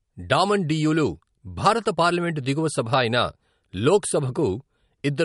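A short speech clip with audible MP3 compression throughout: nothing above about 11.2 kHz, plus watery, swirly artefacts, likely from encoding at a low bitrate, something like 48 kbps.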